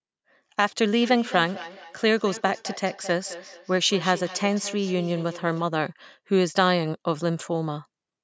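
Feedback echo between two devices runs from 1.02 to 5.69 s: a second device in the room replays the speech, its microphone catches it again, and each phrase returns roughly every fifth of a second, thinner and ringing, peaking about 16 dB below the speech, within the call's 8 kHz band.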